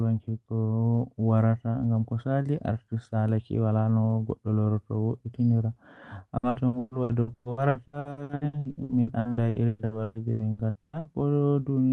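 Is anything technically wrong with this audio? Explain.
Yes. From 6.37 to 11.08 s the speech suffers repeated packet loss, heard as a robotic sound. Around thirty short gaps follow one another, the longest about 120 ms. Each is patched by stretching the previous sound. Nearly half the span is concealed this way, so it turns choppy. The call path itself, with its top end stopping near 12 kHz, fits a super-wideband codec such as Opus.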